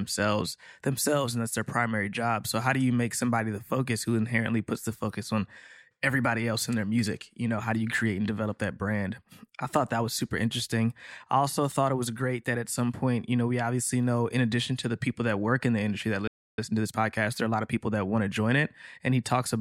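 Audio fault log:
16.27–16.58 s playback stall: The player most likely ran short of buffered data or had its output thread held up, so nothing reached the output for about 0.31 s. Right after "in the industry that" the speech breaks off mid-flow into silence, then resumes.
16.58–17.80 s time-compressed catch-up: Having fallen behind during the stall, the player works off its backlog by removing short slices of audio and cross-fading across each cut, running at 1.25 times normal speed. The speech after the gap sounds rushed but keeps its normal pitch, before settling back to normal pace around "that want to join".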